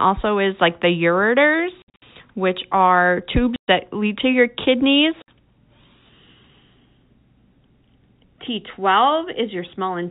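Between 1.82 and 2.02 s, just before "which are", the speech breaks up with packet loss filled with silence: about 160 ms of dropouts scattered across 200 ms, the longest run 60 ms. Between 3.56 and 3.68 s, after "which are" and before "that lead to your", a 120 ms hole appears, then a 60 ms one at 5.22 s. The gap lengths point to 20 ms packets that the receiver replaced with silence. Each hole has hard edges and shows as a flat silent stretch in the waveform and a blank vertical band on the spectrogram, below the 4 kHz ceiling of the G.711 telephone coding.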